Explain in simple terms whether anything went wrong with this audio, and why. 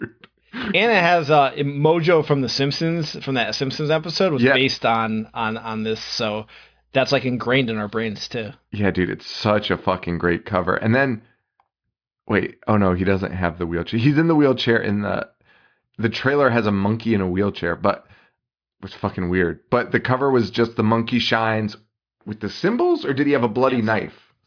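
Nothing went wrong with this recording; the speech runs without any dropout, glitch or distortion that would point to a technical fault.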